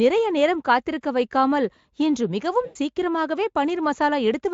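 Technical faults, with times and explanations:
2.65–2.76 s, VoIP packet loss concealed by the speech codec: roughly 100 ms of speech goes missing, and the Speex decoder papers over it by stretching its last pitch and filter while turning the gain down, so the speech smears into a fading buzzy tone or coloured noise and sounds thin just afterwards.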